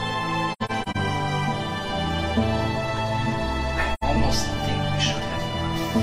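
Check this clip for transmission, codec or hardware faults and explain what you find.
AAC frame loss with muting appears twice, at 0.52 to 0.97 s and at 3.93 to 4.03 s. The decoder received no data for some frames and replaced their spectrum with zeros. The overlapping transform windows then fade the sound out and back in over about a frame. The first stretch loses about 213 ms in short gaps scattered across 427 ms, the longest about a tenth of a second. The second is a single soft-edged hole of 85 ms, which fits two lost frames.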